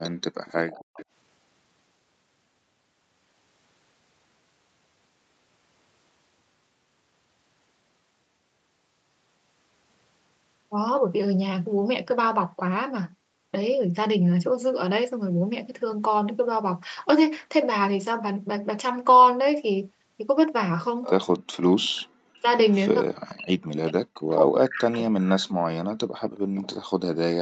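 A far-end echo canceller likely let part of its loudspeaker signal back through, so an echo leak is heard as a copy of the speech trailing by 272 ms, from 0.03 to 1.05 s at about 15 dB below the speech, and again from 21.04 to 21.57 s at about 10 dB below. From 21.81 to 25.11 s, the canceller likely mistook simultaneous talking for echo and pulled the talker down as well, which is speech suppressed in double talk: the speech dips and drops out in pieces, by as much as roughly 40 dB. Within that stretch the same 272 ms echo slips in briefly at 22.69 to 22.75 s, about 30 dB down, then more strongly from 24.3 to 25.45 s at about 10 dB down. A last echo scrap follows from 26.36 to 26.75 s, about 20 dB below the speech.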